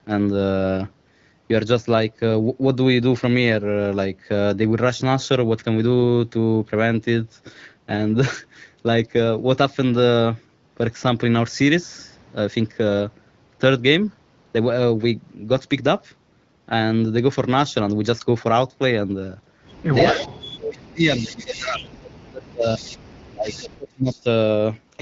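From 20.07 to 20.26 s, a faint delayed copy of the speech comes back, about 20 dB under the talker. This is echo leak. It is likely a far-end loudspeaker echo the canceller failed to remove, returning after 321 ms.

From 20.12 to 22.81 s, speech suppressed in double talk begins. The talker's level dips in pieces, about 40 dB at worst, across roughly two seconds. The canceller likely mistook the talker for echo while both sides spoke, and turned everything down.

Within that stretch, more echo scraps surface at 21.01 to 21.35 s and 21.52 to 21.7 s, the second louder, about 15 dB down. Another follows at 22.69 to 22.97 s. All arrive with the same 321 ms lag.

From 23.32 to 24.26 s, suppression returns, dropping the talker by about 30 dB for under a second. Echo scraps sit inside it, at 23.45 to 23.67 s and 24.08 to 24.2 s, the last about 25 dB down.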